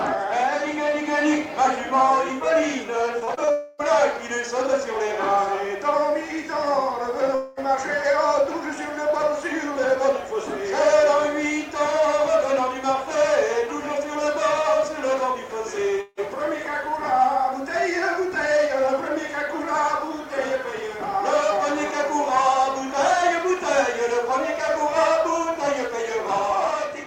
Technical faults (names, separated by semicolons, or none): repeated packet loss (robotic sound); long network dropout